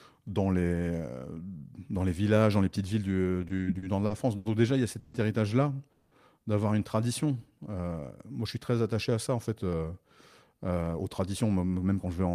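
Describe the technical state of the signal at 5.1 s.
At 5.1 s the sound stalls into a fading buzz-like continuation of what came just before, running from 4.99 to 5.14 s. This call audio freeze was likely caused by delayed packets draining the jitter buffer. About 130 ms was filled in, so the audio then resumes about 130 ms late with nothing lost.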